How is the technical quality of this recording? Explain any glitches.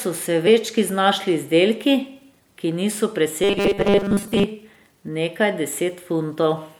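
Two glitches stand out in this speech recording, one very brief and one lasting about a second.

At 0.46 s there's a case of compressed frames skipped. A couple of 26.1 ms frames never got decoded, so roughly 50 ms of audio just disappears. Because neighbouring frames overlap, the jump comes out as a short smeared blip rather than a sharp click.

From 3.44 to 4.44 s you get robotic sound from repeated short buffers. The likely cause is new audio arriving too slowly, with the last 5 ms looped to fill the gaps while most of the real signal gets dropped. That loop imposes a stiff, metallic 200 Hz buzz that only loosely follows the speech.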